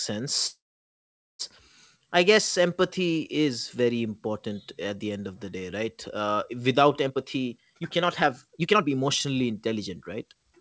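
This is a speech recording with two faults. From 0.47 to 1.42 s there is a call audio freeze: the sound stalls, the last fragment is briefly stretched into a fading buzz, and then about 0.83 s of silence follows before speech resumes where it left off. The likely cause is delayed packets draining the jitter buffer. Nothing is lost, but roughly 0.92 s of extra delay is inserted. On a waveform this appears as a short decaying tail followed by a flat gap. On a spectrogram it appears as a smeared, fading band followed by an empty column. From 7.04 to 10.52 s comes a jitter buffer speed-up, as the receiver sheds its built-up backlog by cutting out short pitch-period-sized slices over and over. Speech runs at about 127% of normal speed at unchanged pitch, and around a second of audio disappears, so it sounds rushed. On a spectrogram the harmonics keep their spacing while the syllables crowd together in time. 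Throughout the clip, the G.722 call path leaves nothing above 8 kHz, consistent with its 64 kbps setting, which shows as a hard ceiling on the spectrogram.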